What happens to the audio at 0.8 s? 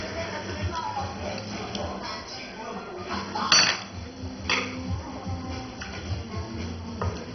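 At 0.8 s you're hearing the same damage that runs through the whole clip: nothing above about 6.1 kHz and a gurgling, granular texture. That's likely MP2 compression at a very low rate, around 32 kbps, shutting off upper sub-bands and coarsely quantising the rest.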